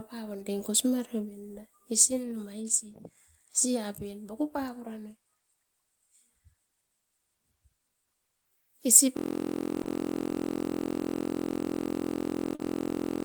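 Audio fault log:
9.17 s to the end, system hang loop: the audio freezes into one 23.22 ms fragment repeating exactly, a steady buzz at 43.1 Hz that fits a 1024-sample buffer cycling after a freeze. The waveform shows identical repeating cycles, and the spectrogram shows flat harmonic lines spaced 43.1 Hz apart.
9.83 to 9.87 s and 12.55 to 12.61 s, short concealed packet loss: about 20 ms and then 40 ms of audio never arrived. The receiver filled each gap by extending the preceding sound, which produces a brief smear. On a spectrogram each gap appears as a short, blurred, over-smooth stretch, and the waveform shows a seam where the real audio blends back in.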